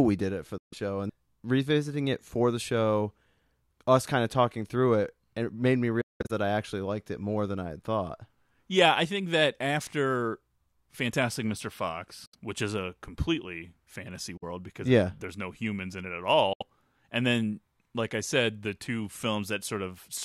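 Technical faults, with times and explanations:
0.58–0.74 s, 6.01–6.31 s, 12.26–12.35 s, 14.37–14.44 s, 16.53–16.63 s: Bluetooth dropout. The speech cuts out for about 140, 230, 70, 46 and 70 ms, the second spread in fragments over 280 ms with a 186 ms longest gap. Audio packets were likely lost on the wireless link, so playback went silent and resumed further on. The waveform shows flat silent stretches, and the spectrogram shows blank vertical bands across all frequencies.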